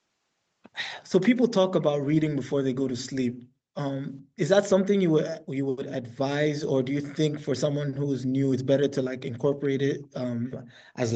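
At 9.62 to 9.67 s a very faint scrap of speech surfaces, trailing the original by 427 ms and sitting far below the talker. It is likely an echo leak: a far end playing the call on a loudspeaker, whose echo canceller let a short piece of what its microphone picked up slip back down the line. Unlike room reverberation, it is a distinct, delayed copy rather than a smooth tail, and at this level it is a brief ghost rather than a clear repeat.

Then comes background gated by the echo canceller, from 9.99 to 10.13 s and again from 10.59 to 10.95 s. The room tone collapses by about 40 dB at its deepest, for brief spells each time, and then snaps back. While loudspeaker playback was active, the canceller clamped the microphone down hard. What sets this apart from the echo leak is that it adds nothing: the ambient bed simply vanishes and returns, like a gate closing, in audio already band-limited to 8 kHz by the call's microphone processing.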